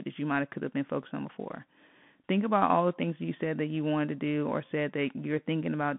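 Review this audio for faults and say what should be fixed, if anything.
Bluetooth CVSD headset codec damage is plainly audible throughout. The speech is confined to about 150 Hz to 3.5 kHz. One-bit slope coding, consistent with 64 kbps, leaves a granular, coarse texture. To prevent it, record through a wideband microphone path rather than a Bluetooth headset's narrowband link.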